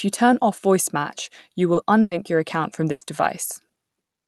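Speech carried over a call, with a high-frequency ceiling near 12 kHz that fits Opus at around 40 kbps, shows brief smears or wobbles at 1.73, 3.05 and 3.67 s. That is short concealed packet loss: about 20 ms failed to arrive, and the receiver bridged the hole by extending the preceding sound before blending back. Longer stretches at 2.01 to 2.13 s and 2.91 to 3.03 s sound like the last sound held and fading, then jumping ahead, with the first ending in a momentary silence of about 10 ms. These are bursts of packet loss, each roughly 100 ms, where the receiver continued and faded the final sound over the gap and resumed later, so that portion of the speech is missing.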